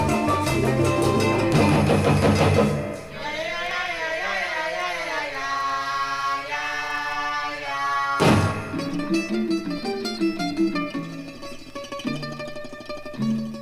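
No technical faults can be heard anywhere in this audio. Nothing breaks up, drops out or distorts at any point along the way.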